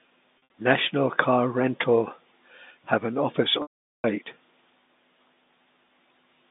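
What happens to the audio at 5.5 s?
Nothing goes wrong at 5.5 s: the speech carries on intact through that moment, with the narrow telephone band of the G.711 line sounding as it does throughout.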